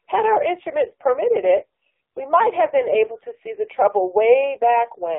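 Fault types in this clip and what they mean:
AMR narrowband mobile codec: The speech has passed through a 2G/3G phone codec that models the vocal tract. Only 200 Hz to 3.7 kHz survives. The voice sounds buzzy and synthetic, which fits a low rate near 5.9 kbps. Damage is heavy throughout.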